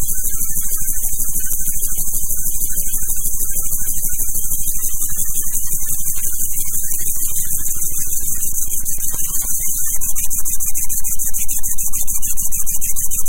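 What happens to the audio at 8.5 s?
At 8.5 s the sound has hard clipping, as it does throughout: it was driven about 3 dB past the limit, flattening a small fraction of peaks into added high harmonics heard as crackle.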